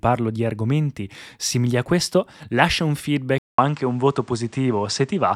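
At 3.38 s the speech drops out for 200 ms. When it returns, it sounds duller and boxier, and it stays that way to the end. Nothing above 9.6 kHz remains. A faint new background noise sits well below the speech. The loudness barely changes. This points to an input switched to a poorer device, likely another microphone or a headset's call profile. That device passes a narrower band and adds its own noise.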